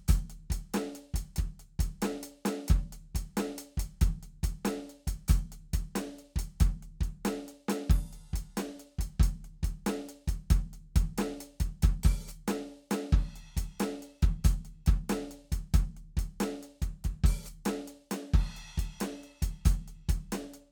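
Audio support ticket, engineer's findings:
Engineer's findings: no faults found in this music clip.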